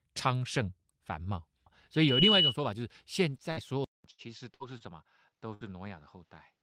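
Loudspeaker feedback squeal, from 1.94 to 2.56 s: the microphone is hearing the loudspeaker it drives, and at 2.9 kHz the loop gain tops unity, so that frequency feeds on itself. It swells over roughly a third of a second into a piercing single tone standing about 10 dB above the speech, then collapses at 2.56 s when the loop is broken or the gain falls back.

Short stall from a late packet, first at 3.37 to 3.42 s, then at 4.11 to 4.21 s and 4.78 to 4.84 s: each time a packet missed its slot and the jitter buffer ran dry, so the receiver held the last sound until the data turned up, then carried on from the same point. Nothing is lost, but the speech hangs for 15 ms, 76 ms and 26 ms respectively.

Burst of packet loss, at 3.51 to 3.60 s, 4.54 to 4.63 s and 5.54 to 5.64 s: here the missing audio never arrived in time. The receiver extended and faded the preceding sound for about 55 to 67 ms, giving a brief held buzz or dying hiss, and then resumed about 60 ms further on, so a small piece of the speech is skipped each time.

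Input switched to a poorer device, from 3.84 s to the end: the sound drops out for about 200 ms, then returns roughly 5 dB quieter and duller, with nothing above 7.6 kHz and a new noise floor about 50 dB down. The likely cause is the recording moving to a different, narrower-band microphone or a headset's call profile partway through.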